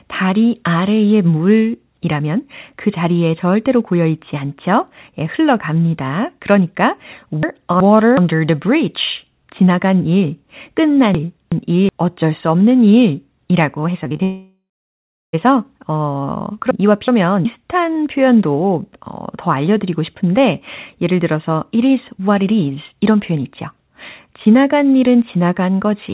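At 7.43 to 8.17 s, just after "않죠 예 흘러갑니다 그러니까" and before "the bridge 지나간 일", the speech jumbles briefly. The same garbled moment returns at 11.15 to 11.89 s, leading into "어쩔 수 없는 일이라고", and again at 16.71 to 17.45 s. These are chunks out of order: each time a block of about 0.37 s arrived one block late and played after the block that should have followed it. Nothing is lost, but the sequence is scrambled at three hard seams.

Right after "어쩔 수 없는 일이라고", from 14.04 to 14.21 s, the speech turns choppy. This is repeated packet loss, giving a robotic sound: four short holes, the longest 26 ms, come in quick succession. Each one is patched by stretching the preceding sound, so about 41% of that stretch is concealed rather than real audio.

Immediately after, from 14.23 to 15.35 s, a fading buzz gives way to about 0.69 s of silence before the speech resumes with roughly 1.1 s missing. This is most likely a long network dropout, where the receiver extended the last sound until it died out. 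Throughout, the sound is band-limited with nothing above 4 kHz, which points to a narrowband call codec such as G.711.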